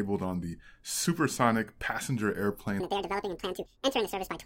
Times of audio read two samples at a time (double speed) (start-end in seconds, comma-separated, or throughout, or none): 2.80-4.45